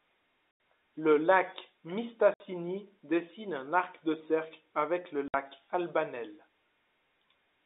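Speech over a narrow telephone-band line. It has packet loss filled with silence at 0.51 s for 90 ms, and at 2.34 s and 5.28 s for 60 ms each. The lost packets became hard-edged gaps, which fits 30 ms packets.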